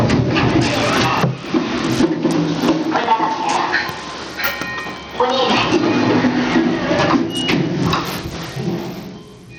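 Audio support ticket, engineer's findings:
Gain pumping, entire clip. Input gain likely set far too high, with a fast limiter clamping down on each loud event. Gain swing around 15 dB. Dynamics squashed; loud and quiet parts sit too close in level.

Bluetooth SBC compression, entire clip, plainly audible. Likely a starved SBC link; the damage fits a low bitrate of roughly 80 kbps. Upper sub-bands get few or no bits and drop out or flicker. Remaining bands coarsely quantised, leaving gritty noise and aliasing on top of the sound.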